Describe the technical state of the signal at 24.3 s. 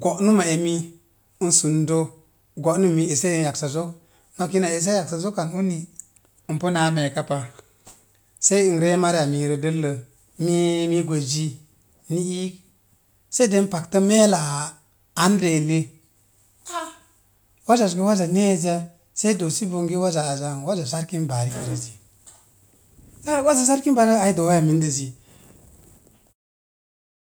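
At 24.3 s the speech signal is intact, with no audible fault at that moment.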